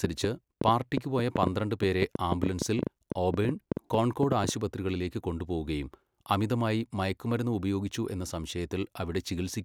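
From 0.04 to 4.50 s a train of clicks pops over the speech: around 30 irregular, loud pulses at 6.5 per second, likely from interference.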